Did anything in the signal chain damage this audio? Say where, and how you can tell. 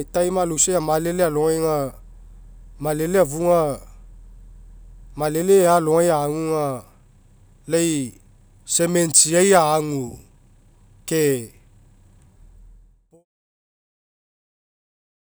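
No, nothing damaged it.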